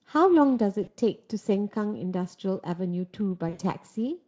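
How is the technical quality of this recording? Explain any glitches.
Two short dropouts stand out in this speech recording, carried over a Speex link whose coding damage stays light. VoIP packet loss concealed by the speech codec hits at 0.83–0.93 s and 3.49–3.61 s. The decoder stretched its last pitch and filter into a fading buzzy or noisy smear, briefly at first, then longer the second time.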